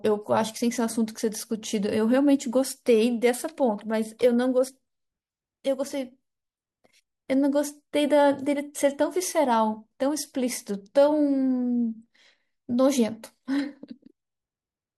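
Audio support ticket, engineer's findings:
No faults found on listen-through of the speech clip; nothing to escalate.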